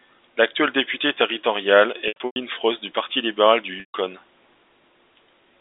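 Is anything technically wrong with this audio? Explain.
Yes. Packet loss with pitch repetition occurs twice, from 2.08 to 2.36 s and from 3.80 to 3.94 s. The first gap is scattered, with about 200 ms missing and the longest run at 100 ms. The second loses 140 ms continuously. The receiver fills each gap by looping the last pitch period and fading it out over roughly 50 ms. You hear a brief buzzy hold, then silence, then a short cross-fade back into speech, all within the telephone-band G.711 line.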